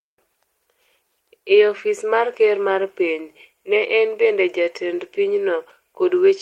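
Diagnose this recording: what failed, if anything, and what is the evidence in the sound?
Nothing failed: there is no evidence in the sound of any fault in this recording.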